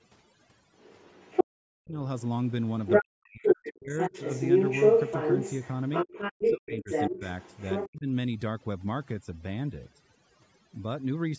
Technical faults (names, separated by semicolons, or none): overdone noise removal; other side's voice leaking through; speech suppressed in double talk